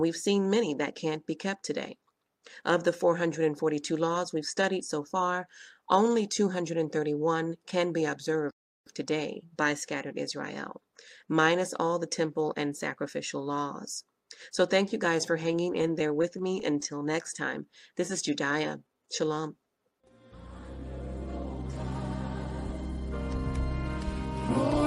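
The audio has a playback stall from 8.50 to 8.87 s. The sound cuts to silence mid-flow for about 0.36 s, then carries on. This is likely the player running dry of data or having its output thread blocked. One silent hole with nothing filled in is what separates it from a stutter.

From 15.43 to 17.31 s there are repeated stalls (stutter). The receiver's jitter buffer emptied 27 times as packets arrived late or too slowly, and each time the last sound was held over to bridge the wait. None of these holds is longer than 14 ms, and together they add up to 274 ms, about 15% of that stretch. No audio is lost and nothing drops to silence, so the passage drags and judders unevenly instead of pausing once.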